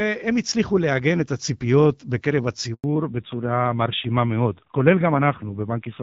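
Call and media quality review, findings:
Handover gap, 2.74 to 2.84 s: speech stops abruptly, 100 ms of silence. Network handover; no speech frames delivered while the link switched, so content in that window is lost.

Fallback to narrowband, 2.84 s to end: nothing above 4 kHz, duller and rougher. The call likely dropped from the wideband HD Voice codec, which sounds clear before the gap, to a narrowband codec at a low rate.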